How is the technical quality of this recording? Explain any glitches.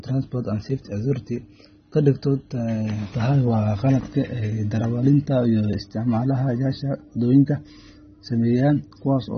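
Quality is reduced by codec damage across the whole speech clip. From start to end, AAC compression is the likely cause. Nothing remains above 6.3 kHz, which fits a low bitrate around 24 kbps. Coarse quantisation leaves speech dull with a warbling smear, unlike a simple low-pass filter.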